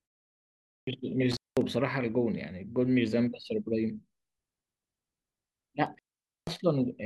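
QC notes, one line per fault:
0.32–0.87 s, clipped start after a pause: after 0.32 s of silence the output device is still waking and relocking, so about 0.55 s of speech is swallowed and the sound begins abruptly.
1.31–1.62 s and 5.86–6.57 s, intermittent contact: a loose cable or plug briefly opens, cutting the sound for about 0.20 s and then about 0.48 s. Crackle marks each edge and faint hiss fills the gap, unlike a clean digital dropout.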